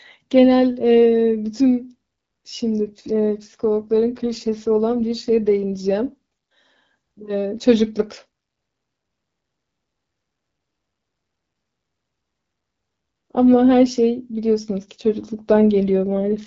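From 2.76 to 5.91 s, and again from 14.81 s to the end, the speech shows an AMR rate drop. The wideband HD Voice coding steps down, roughness consistent with a fall from 12.65 to about 8.85 kbit/s. Fewer bits describe the voice, so it turns grainier and more synthetic. Unlike a fallback to narrowband, the 7 kHz band stays intact, and unlike packet loss nothing drops out. Only the texture coarsens until the rate recovers.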